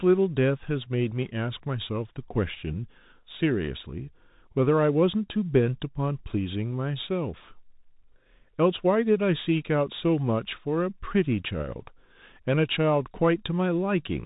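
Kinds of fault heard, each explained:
Bluetooth CVSD headset codec: The speech sounds boxed-in and thin, nothing above about 3.8 kHz, with scratchy s sounds and a grainy hiss beneath. This fits a 64 kbps one-bit delta coder whose adapting step can't follow fast, loud high-frequency movement, so it distorts plainly.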